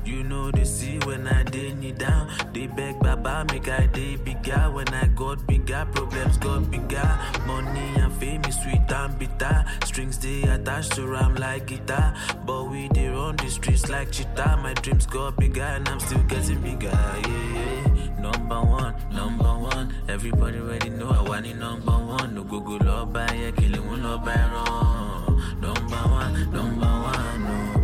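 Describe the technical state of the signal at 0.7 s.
A single sharp click sits at 0.67 s, a brief tick with a thin vertical line across the spectrum. The cause is likely dropped samples: a handful of samples, roughly a tenth of a millisecond, went missing, so the waveform jumps abruptly to a later value, far too briefly to remove any audible sound.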